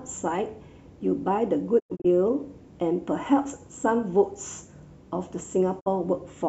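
Speech with two digital broadcast dropouts. From 1.78 to 2.06 s the sound mutes in several short holes totalling 144 ms over about 240 ms, the longest 96 ms, which points to roughly six corrupted frames. At 5.79 to 5.88 s a single 48 ms gap follows. Each mute ramps down over 20 ms into true silence with no hiss, static or smeared concealment, so the missing frames were discarded rather than weakened or patched over.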